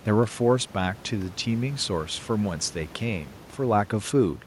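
No technical faults can be heard in the signal, and the only background is the room's own noise, about 25 dB below the speech.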